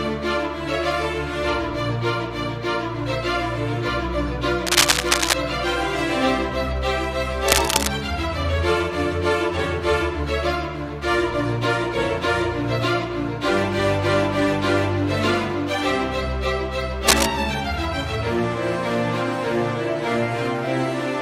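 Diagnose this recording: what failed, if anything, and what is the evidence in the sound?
Cable scratch noise, analogue wiring. Scratchy bursts at 4.67–5.33, 7.47–7.88 and 17.08–17.26 s, roughly 5, 0 and 5 dB above the sound. Likely a worn contact with jumping resistance.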